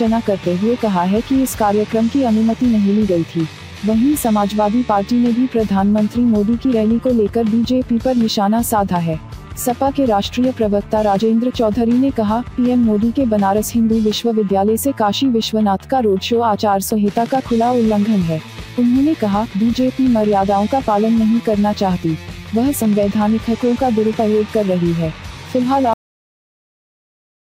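At 25.94 s the audio has a cut-off end. The sound stops abruptly mid-event and falls straight to digital silence, with no decay or natural tail, and that silence holds for the remaining 1.6 s of the file. The cause is that the final buffers were never written or played out, so everything after that point is missing rather than faded. What remains is an unnatural hard stop, heard as a sudden truncation instead of an ending.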